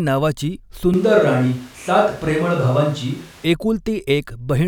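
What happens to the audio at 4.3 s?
Nothing goes wrong at 4.3 s; the audio is intact at that moment.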